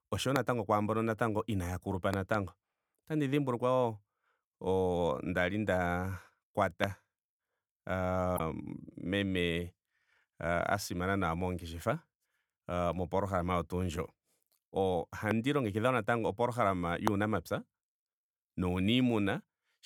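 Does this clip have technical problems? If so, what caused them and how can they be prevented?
Yes. There are loud pops at 0.36, 6.84 and 15.31 s. Another comes at 17.08 s, just after "natango opolohalama". After "inaaya kulupa", a pair of pops runs from 2.14 to 2.36 s. Most peak about 20 dB above the speech, and the pair about 15 dB. The speech continues underneath each one. A sudden electrical pulse, likely from a plug, switch, static or driver glitch, was added to the signal. Securing cables and grounding gear prevents this.

Damaged data in a compressed stream appears from 8.35 to 8.40 s as a short blip. Some bytes in the encoded stream were wrong there. The decoder lost sync on those frames and skipped ahead to the next valid header, so a fragment of sound is garbled or missing. Using reliable storage and transfer with checksums prevents this.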